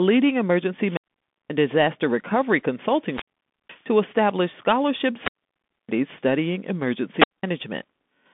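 From the start, the speech comes through a Bluetooth CVSD headset codec, which fits a 64 kbit/s CVSD stream. CVSD encodes one bit per sample, signalling only whether the waveform steps up or down, with an adaptive step size. The line passes roughly 150 Hz to 3.5 kHz, so the audio sounds narrow and boxy. The codec damage is plainly audible: granular hiss sits under the speech, sibilants turn scratchy, and loud high-frequency content distorts where it outruns the step size.

Four wireless microphone squelch dropouts break the signal, at 0.79 to 1.55 s, 2.94 to 3.88 s, 5.16 to 5.89 s, and 7.09 to 7.47 s. In each, the FM radio link fades until the receiver's squelch gate mutes the output. The sequence is a short rise of hiss or static, then near silence, then the signal returns. The muted holes last about 0.53 s, 0.48 s, 0.61 s and 0.2 s respectively.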